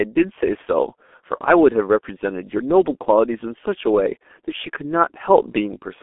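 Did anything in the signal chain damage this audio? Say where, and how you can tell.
Yes: a G.723.1 codec stage throughout, heavily damaged; nothing above 3.7 kHz, a 250 Hz to 3.5 kHz band, and coarse 30 ms frames at about 6.3 kbit/s muffling and roughening the speech.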